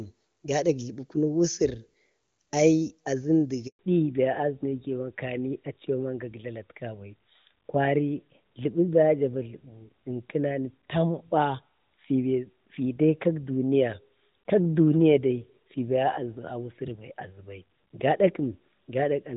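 At 3.67 s a handover gap cuts the speech for 120 ms, until 3.79 s. The call was being passed between networks and no speech frames arrived during the switch, so the sound drops away quickly and leaves a short, dead silence before the new link picks up.

From 3.79 s to the end, the call shows a fallback to narrowband. Before the gap the wideband HD Voice codec sounds clean, consistent with AMR-WB at a high rate such as 23.85 kbit/s. Afterwards everything above 4 kHz is missing, which points to AMR-NB at around 12.2 kbit/s, and the speech becomes duller and rougher.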